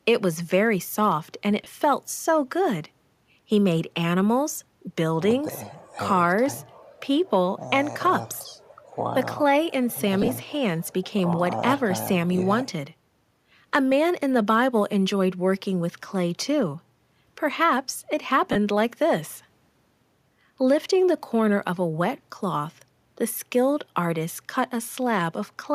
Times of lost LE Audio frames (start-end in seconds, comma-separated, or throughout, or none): 1.64-1.67, 10.22-10.29, 18.52-18.56